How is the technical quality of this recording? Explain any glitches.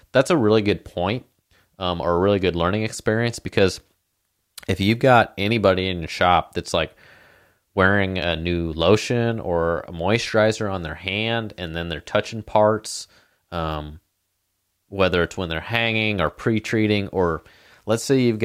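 No technical glitches can be heard anywhere in the recording; the speech signal comes through intact, with nothing that points to a fault in capture, processing or playback.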